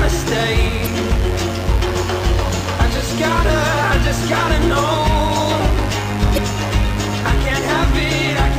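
A steady, raspy mains buzz sits under the whole recording at roughly 15 dB below the signal. It is built on 50 Hz, with a dense stack of harmonics reaching well into the kilohertz range. That pattern comes from sharp switching spikes twice per mains cycle, the kind a dimmer, a rectifier or missing shielding lets into the audio path. The audio also shows damaged data in a compressed stream, heard as brief glitches from 0.83 to 0.87 s and from 6.34 to 6.38 s, each about 44 ms long. At those points corrupted or missing bytes leave the decoder unable to read the frames. It loses sync and puts out garbage until it locks onto the next valid frame header.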